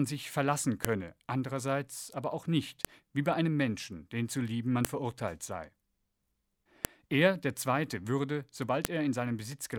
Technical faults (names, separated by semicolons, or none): file header played as audio